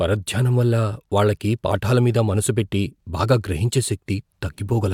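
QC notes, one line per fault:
No faults heard in this speech recording.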